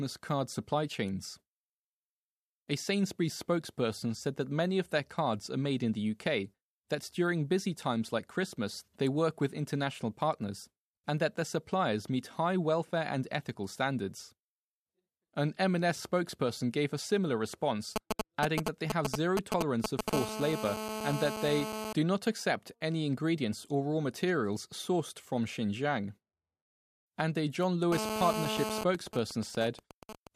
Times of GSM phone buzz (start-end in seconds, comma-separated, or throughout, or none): 20.13-21.93, 27.92-28.84